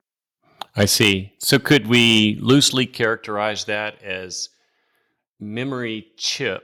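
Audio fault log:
0.8–1.11 s, 1.52–2.2 s, 2.49–2.63 s: microphone overload. The input level was likely set too high, driving peaks about 8, 7 and 5 dB past the converter's ceiling. A few percent of samples are flattened, giving the loudest speech a harsh, crackly edge.
1.73 s, 2.73 s: microphone volume stepped down. Each drop likely comes from the call software cutting the device's input gain after detecting clipping, by about 2 dB and then about 5 dB. Speech and background both fall abruptly in level.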